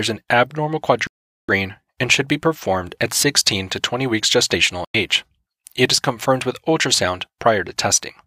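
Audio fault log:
1.07–1.49 s, digital broadcast dropout: after "an abnormal" the receiver lost good frames and muted, so about 0.42 s of sound just vanishes before "and should be performed".
4.85–4.95 s, digital broadcast dropout: a shorter muted hole of about 0.1 s, again the receiver blanking failed frames, so that stretch of the broadcast is simply gone.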